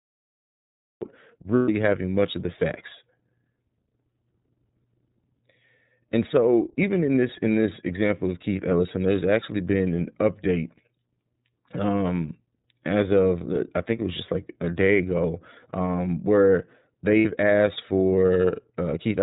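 Throughout, the speech carries the iLBC codec's signature: nothing above 4 kHz survives, and the voice has a plainly audible rough, slightly synthetic grain, consistent with the 13.33 kbps mode using 30 ms frames. That grain separates it from a simple low-pass filter, which would dull the sound without roughening it.

The clip opens with a cut-off start. There is digital silence until 1.02 s, and then the sound begins abruptly partway through, with no attack or fade. The start is hard and instant, which distinguishes it from a slow fade-in or a gradual level rise.

Lost iLBC frames follow from 1.56 to 1.69 s, a 120 ms gap that fits four 30 ms frames, and again from 17.19 to 17.26 s, lasting 60 ms. In each gap the decoder repeats the last pitch cycle mixed with noise, so it sounds like a held, faintly buzzy vowel rather than silence. The voice returns to normal almost immediately afterwards, with no lingering smear.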